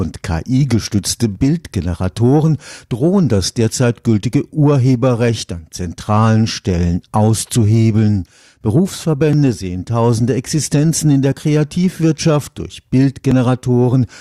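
Overlap between stream segments produces tiny skips in the speech at 1.35, 4.34 (after "drohen das derzeit"), 9.33 (before "sehen tausende"), 11.32 (after "in der") and 13.31 s. Each drops about 8 to 17 milliseconds at one-second segment joins, leaving a waveform discontinuity and a thin vertical spectrogram line.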